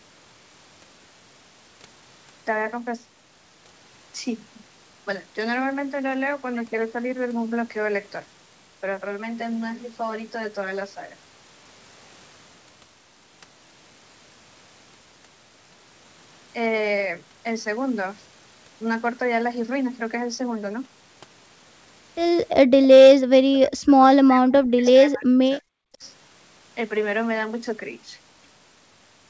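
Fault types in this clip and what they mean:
channel delay (comb filtering): one channel runs about 10 ms behind the other, and summing them to mono cancels shared content at evenly spaced frequencies starting near 50 Hz. From 9.06 to 11.97 s the speech turns hollow and phasey with fixed notches.
speech suppressed in double talk: with both sides talking at once, the echo canceller likely mistook the near talker for loudspeaker echo and pulled the level down. The speech drops by about 40 dB from 23.31 to 24.01 s and from 24.21 to 25.65 s, and by about 15 dB briefly at 25.92 s.
echo leak: the loudspeaker side's echo canceller likely let part of its loudspeaker pickup through, sending a copy of the speech back 323 ms late. At 24.85 s a faint scrap of delayed speech, about 20 dB below the main level, surfaces inside the suppressed stretch.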